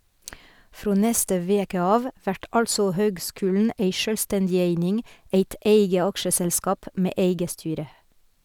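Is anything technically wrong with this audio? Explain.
Yes, there is one fault in the speech. At 3.65 s, a single sharp click is heard, likely from dropped samples: a couple of samples go missing, so the waveform jumps abruptly, leaving a thin vertical line across the spectrogram.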